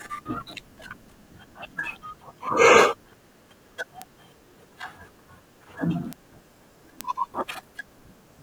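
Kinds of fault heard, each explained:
Bit error spike: one flipped bit makes a single sample jump by a power of two and snap straight back, heard as a sharp broadband tick unrelated to the speech. Three occur, at 4.02, 6.13 and 7.01 s, reaching about -11, -11 and -5 dBFS.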